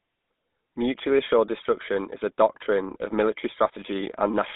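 Throughout, the speech carries GSM full-rate codec damage. Pulse-driven vocal-tract coding, consistent with 13 kbps, leaves a buzzy, gravelly roughness. Nothing passes above 3.8 kHz.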